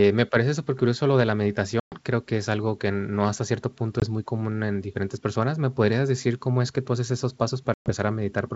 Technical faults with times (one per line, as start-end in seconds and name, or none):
1.80-1.96 packet loss on an ADPCM call
4.00-4.04 packet loss on an ADPCM call
7.74-7.91 packet loss on an ADPCM call